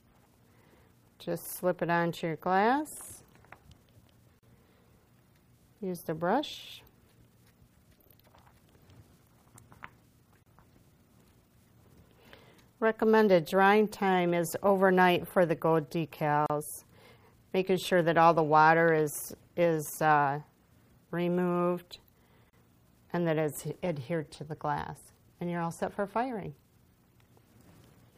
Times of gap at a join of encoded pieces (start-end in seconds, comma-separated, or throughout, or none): 4.39-4.43, 10.43-10.46, 16.46-16.50, 22.50-22.53